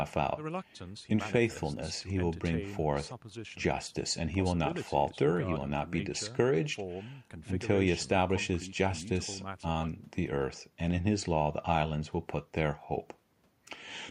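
No dropouts, distortion or other technical faults can be heard anywhere in the recording.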